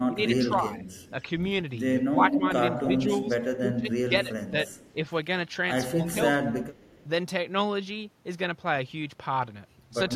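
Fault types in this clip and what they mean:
Speech suppressed in double talk: when both ends talk at once, the echo canceller likely mistakes this voice for returning echo and pulls it down. Here the voice dips by as much as about 25 dB in three patches, around 0.1, 2.0 to 4.6 and 5.9 to 6.8 seconds.
Echo leak: the far end's loudspeaker pickup isn't fully cancelled, likely a weak echo canceller, so a delayed copy of the voice comes back, roughly 230 to 270 ms late. Mostly it's faint, but from 2.15 to 3.29 seconds it's about as loud as the speech itself.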